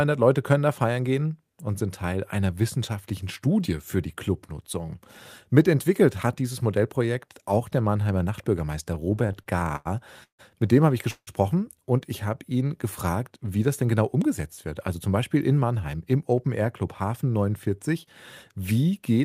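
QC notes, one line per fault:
8.83–9.87 s, repeated stalls (stutter): the speech drags and catches fifteen times in about a second, the longest hold near 97 ms, roughly a quarter of the span filled in. Packets kept arriving late, the jitter buffer repeatedly ran dry, and the receiver stretched the last sound each time.
10.23–10.41 s and 11.11–11.29 s, call audio freeze: each break is a short fading buzz dropping into near-silence, the first 154 ms long with about 120 ms quiet, the second, between "dem habe ich" and "und ich habe ihn", 162 ms with about 70 ms quiet. Delayed packets likely emptied the buffer; the speech resumes where it stopped, nothing lost.
13.30–15.09 s, jitter buffer speed-up: after "und ich habe ihn" the speech sounds hurried, running about 8% fast at unchanged pitch. With too much audio queued after the late packets, the receiver cut tiny pitch-period slices over and over, trimming roughly 150 ms to catch up.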